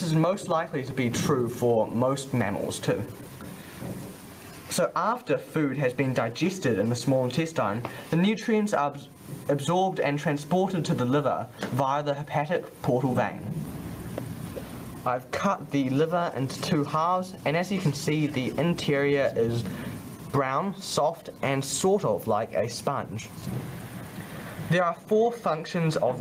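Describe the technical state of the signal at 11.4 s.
At 11.4 s there's gain pumping, present throughout: the gain swings by around 20 dB, squashing everything, likely from gain set too high into a fast limiter.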